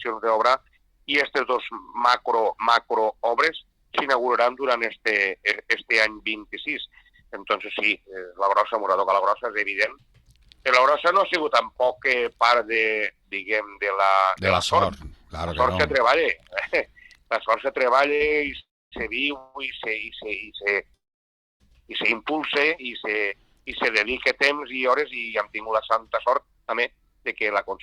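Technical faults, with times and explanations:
18.15 to 18.22 s, short stall from a late packet: the jitter buffer briefly ran dry, so the last sound was stretched for 47 ms before playback resumed with nothing lost. It is heard as a held sound with a slight buzz or dip. A spectrogram shows frozen, smeared harmonics, and the waveform shows a repeated cycle.
18.59 to 18.94 s, 19.38 to 19.56 s and 20.94 to 21.62 s, call audio freeze: the audio stalls, likely because packets were held up in transit and the buffer emptied. The last sound continues as a fading buzz or hiss, and the first and last stalls end in silence, about 270 ms and 620 ms of it. The gaps add 322, 168 and 656 ms of delay, with no audio lost. A spectrogram shows a smeared, decaying band followed by blank columns, and the waveform flattens to a near-zero line.
23.20 to 23.61 s and 24.06 to 27.58 s, jitter buffer speed-up: to cut the built-up delay, the receiver repeatedly removed short pitch-period slices, about 40 ms in the first stretch and roughly 200 ms in the second. 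Playback runs about 8% and then 5% fast, and it sounds hurried at an unchanged pitch. On a spectrogram, events are compressed in time while harmonic spacing stays the same.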